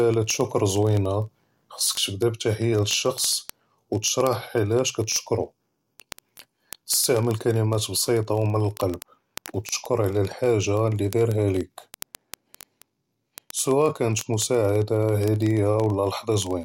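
From 0.12 s to 16.63 s, sharp ticks of uneven strength, roughly fifty a second: word clock ticks, an unlocked receiver clock slipping single samples.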